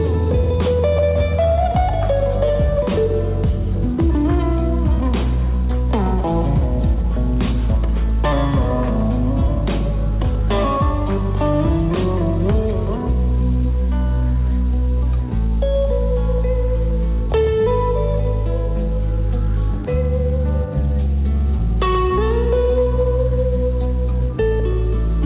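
No faults are audible; the sound passes a call path whose band stops at 4 kHz, which fits a 64 kbps G.711 mu-law codec.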